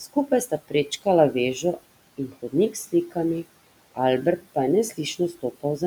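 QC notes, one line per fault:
2.18–2.53 s, speech cut by the noise suppressor: within this span the suppressor misread part of the speech as background and pulled it down along with the room noise, which sits about 22 dB below the speech, with the deepest dip reaching about 10 dB. Only around a tenth of a second of the sound is actually affected, but that stretch comes across swallowed and faint, as if the soft edges of the speech had been gated away.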